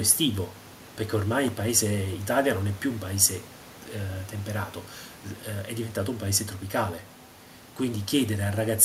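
No technical faults can be heard anywhere in the recording.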